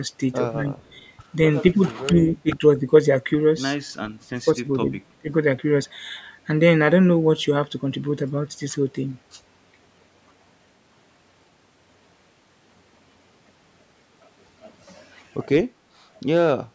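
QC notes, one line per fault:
0.6–0.67 s, 1.72–1.85 s, 2.06–2.85 s, 4.28–4.92 s, 5.08–5.3 s, speech suppressed in double talk: with both ends talking at once, the echo canceller likely could not tell the near talker from loudspeaker echo and pulled its gain down on both. The speech dips by about 5, 10, 15, 25 and 20 dB respectively, for stretches from a brief instant up to around half a second, the 4.28 s dip being deepest.
0.86–1.03 s, echo leak: the far end's echo canceller likely failed to remove all of what its microphone picked up from its own loudspeaker, so part of it was sent back. A copy of the speech returns about 222 ms late, sitting roughly 40 dB under the main speech. It is a faint, delayed ghost heard only in this short scrap rather than a sustained echo.
15.79–15.98 s, background gated by the echo canceller: while the loudspeaker was active, the canceller clamped the microphone hard, and the room sound drops by about 19 dB for around a fifth of a second before returning when the canceller releases. 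The gap is a brief hole in the background. The call's microphone processing leaves nothing above 8 kHz.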